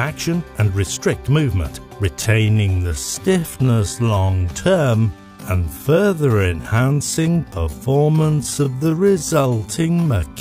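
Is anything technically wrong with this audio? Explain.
Yes. From 2.08 s to the end at 10.41 s there is a time-stretched section: the pace suddenly drops to about 0.57 times normal speed while the pitch stays put. Software likely lengthened the audio by repeating short pieces, which makes it drag. A plain playback slowdown would also lower the pitch.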